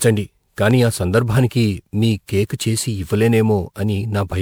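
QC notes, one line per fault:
throughout: generation loss. The speech sounds swirly, smeared and hollow, with blurred attacks. It likely went through around seven MP3 encodes at 128 kbit/s, with errors piling up.
0.71–0.73 s: loud pop. A single sharp pop peaks about 5 dB above the speech, which carries on underneath. It is likely a brief voltage spike entering the signal path.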